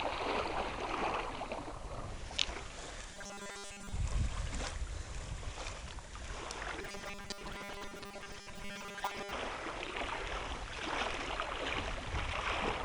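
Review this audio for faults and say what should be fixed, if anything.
Robotic sound from repeated short buffers occurs at 3.14–3.92 s and 6.81–9.32 s. A rigid 200 Hz buzz replaces most of the sound. Input likely arrives too slowly, so a 5 ms chunk repeats. Deeper buffering would prevent it.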